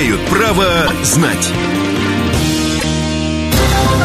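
A brief stutter jumps at 0.85 to 0.91 s and again at 2.78 to 2.84 s: repeated frames. Each time, about 26 ms of sound plays twice, which fits one compressed frame being decoded again, so each repeat stretches the audio by 26 ms.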